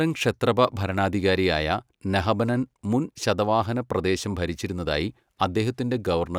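No technical faults can be heard anywhere in the recording.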